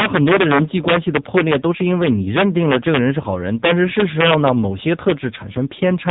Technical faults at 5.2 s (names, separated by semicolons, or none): integer overflow; AMR narrowband mobile codec